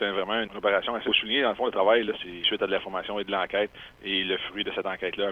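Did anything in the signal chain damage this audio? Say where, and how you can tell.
Yes. Skip ahead at 1.07–1.09 s: about a second of audio vanishes at the network or jitter buffer stage, and playback jumps forward with no gap.

Jitter buffer speed-up at 1.47–2.88 s (110%), 3.36–3.97 s (107%) and 4.82–5.27 s (108%): the receiver trims pitch periods to shed excess delay, so the sound hurries at unchanged pitch.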